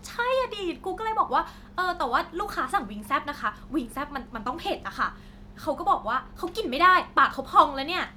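No technical faults are audible.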